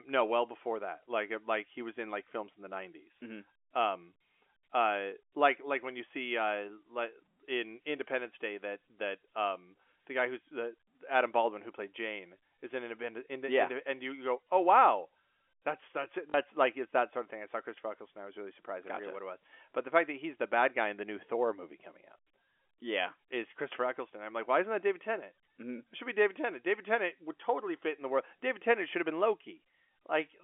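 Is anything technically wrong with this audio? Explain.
Yes, there is one brief fault. At 16.3 to 16.34 s, just after "wow that's that's it" and before "like it's that sort", there is packet loss with the last packet repeated. About 40 ms of audio went missing, which fits two 20 ms packets, and the receiver filled the gap by replaying the final packet it had. The stretch has a short robotic stutter with a buzz near 50 Hz. A plain dropout would leave silence or a gap instead, but here the gap is filled with repeated sound. The telephone-band coding heard throughout is not part of this fault.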